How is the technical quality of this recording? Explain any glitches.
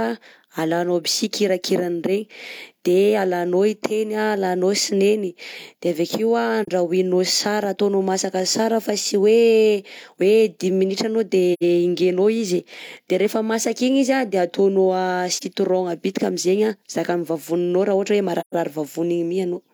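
The speech has four brief gaps from AAC frame loss with muting, at 6.62–6.68 s, 11.53–11.63 s, 15.37–15.44 s and 18.40–18.54 s. Missing frames were decoded as silence, and overlapping windows fade each hole in and out. These softly ramped edges distinguish it from a hard dropout. Hole lengths of about 43, 85 and 128 ms fit one, two and three lost frames.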